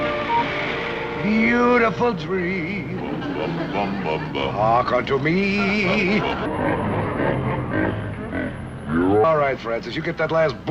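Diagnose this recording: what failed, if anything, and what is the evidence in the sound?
Section at the wrong speed, 6.46 to 9.24 s: 0.68x, about seven semitones down; spectrogram harmonics drop and stretch. Likely a playback clock mismatch.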